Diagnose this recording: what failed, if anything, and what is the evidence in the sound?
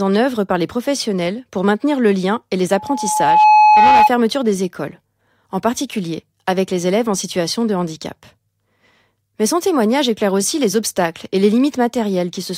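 A loudspeaker feedback squeal occurs in the analogue acoustic path, from 2.71 s to 4.10 s, just after "le lien et les" and ending before "des écoles en particulier". A single tone near 851 Hz swells over roughly three quarters of a second to sit about 10 dB above the speech. The microphone was picking up its own loudspeaker, and at that frequency the loop gain exceeded one, so the tone kept reinforcing itself.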